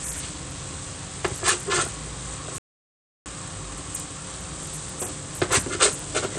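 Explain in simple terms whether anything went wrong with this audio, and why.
Low bit depth with dither runs from 0.00 to 1.54 s. The sound is stored with only 8 bits, so its levels are rounded very coarsely. A little random noise is mixed in before rounding, which turns the error into a steady, fairly loud hiss.

An audio dropout to silence runs from 2.58 to 3.26 s, about 0.68 s. The sound cuts off completely, with no background left, then returns. The input was most likely lost for that moment while the recording kept writing pure silence.

Bluetooth SBC compression likely affects the whole clip. This basic Bluetooth codec splits the sound into a few wide frequency bands and gives the top ones too little data. As a result, the treble thins out and flickers, and a gritty roughness sits on everything.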